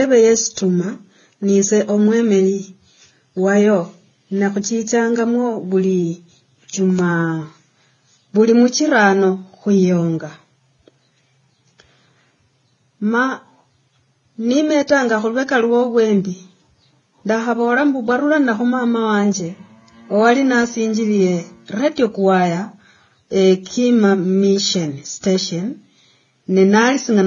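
From start to finish, the speech has no content above about 6.9 kHz. Two different kinds of coding artefacts are heard together. The likely cause is transcoding between lossy codecs, a Vorbis encode followed by low-bitrate AAC-LC.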